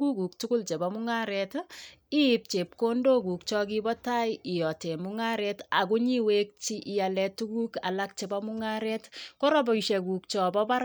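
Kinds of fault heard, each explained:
Clock slip clicks: faint ticks roughly every 0.7 seconds through the speech, likely two unsynced clocks about 40 ppm apart dropping or repeating a single sample.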